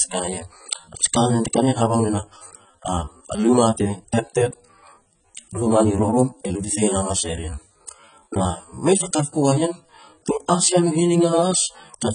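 From start to finish the speech sounds dull and smeared, with a warbling, fizzy texture on sustained sounds and sibilants and nothing above 9.6 kHz. This is likely heavy AAC compression, which fits AAC-LC at about 16 kbps, starving bands and leaving spectral holes.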